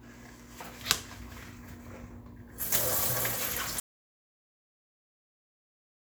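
A short clip of sounds that suffers an audio dropout to silence at 3.80 s: everything cuts off abruptly and stays silent right through to the end, with no room tone at all. That's most likely the input being lost mid-recording while the recorder kept writing silence.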